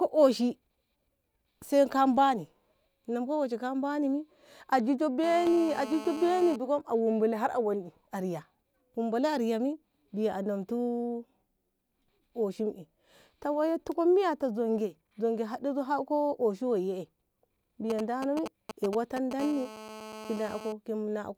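A nearby 2G phone in an active call is transmitting its radio bursts about 217 times a second, and the audio circuitry rectifies them into GSM phone buzz. In this speech clip it appears from 5.24 to 6.56 s and again from 19.40 to 20.73 s as a hard, raspy 217 Hz buzz full of harmonics, about 13 dB and 14 dB below the speech respectively. Just before that second stretch, from 17.90 to 19.33 s, a nearby 2G phone sends only short groups of GSM signalling bursts. They are picked up the same way and come through as a galloping dit-dit-dit of brief 217 Hz buzzes, roughly 10 dB under the speech.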